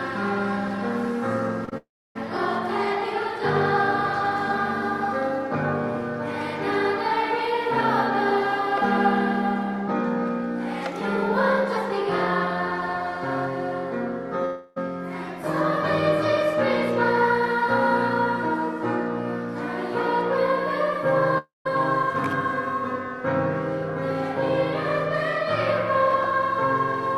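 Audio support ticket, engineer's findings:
Short concealed packet loss, 1.65 s and 1.69 s, back to back, each about 40 ms: brief smear or wobble where the receiver's concealment extended the preceding sound, then blended back in. Unlike a dropout, the gap is bridged and never goes silent.

Long network dropouts, 1.77–2.17 s, 14.45–14.78 s, 21.38–21.67 s: a fading buzz or hiss, then silence (about 0.3 s in the first, 0.17 s in the third, none in the second). Audio resumes with material missing. Likely cause: the stream stopped arriving at the receiver for a few tenths of a second. Unlike short loss, the gap exceeds what concealment can bridge.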